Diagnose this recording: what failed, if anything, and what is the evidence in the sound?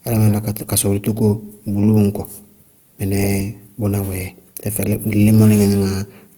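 The codec stage shows damage for the whole clip, most likely from Opus compression in its music (CELT) mode. The speech sounds rough and grainy, with tonal parts turned noisy, but it doesn't have the swirling, hollow holes that MP3 leaves, because the band energies are kept and starved bands are filled with folded or noise content. The bandwidth stays fullband up to about 20.2 kHz. The damage level fits a rate near 24 kbps.

From 0.14 s to 6.36 s there is a steady soft rattle of tiny ticks, about one every 0.05 s, roughly 20 per second. This is clock slip clicks at the converter or driver stage. Two free-running clocks differ by roughly 400 ppm, so a single sample is dropped or repeated each time the drift adds up to one sample. Dropout or packet-loss clicks come at irregular times, but these are evenly spaced for the whole span, which points to a clock mismatch as the likely cause.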